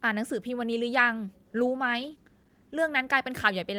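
At 1.47 s the speech turns rough and watery, a call bitrate drop. The encoder is starved of bits, which fits a fall from about 32 to 14 kbps, for about 1.3 s until 2.83 s. A spectrogram shows the upper band vanishing and the remaining detail coarse.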